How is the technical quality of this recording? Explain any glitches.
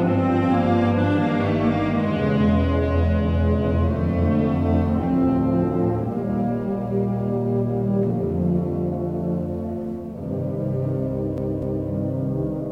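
One glitch mars the end: from 11.37 to 11.87 s, a CD stuck on one turn replays the same 0.25 s twice, each jump muted briefly, giving an even, mechanical stutter unlike a random dropout.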